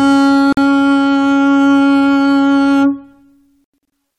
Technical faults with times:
0.53-0.57 Bluetooth dropout
3.64-3.79 Bluetooth dropout

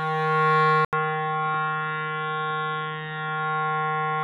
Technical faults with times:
0.85-4.24 input switched to a poorer device

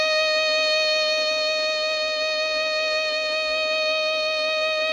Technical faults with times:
none

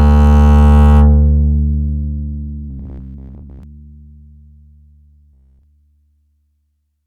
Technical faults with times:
2.70-3.63 robotic sound from repeated short buffers
5.33-5.63 robotic sound from repeated short buffers

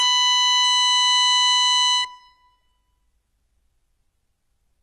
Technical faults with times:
0.00-4.82 HE-AAC compression

